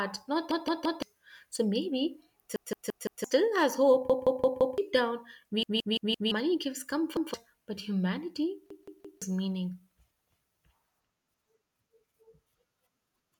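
Speech recording with repeated buffer faults. Six stutters occur, at 0.51 to 1.02 s, 2.56 to 3.24 s, 4.10 to 4.78 s, 5.63 to 6.32 s, 7.17 to 7.34 s and 8.70 to 9.22 s. Each time, one piece about 171 ms long sounds again, one to four extra times. Every repeat has a hard join. That length fits an 8192-sample buffer. New audio arrived late, so the device replayed its last block. Each stutter loses up to roughly 0.7 s of speech.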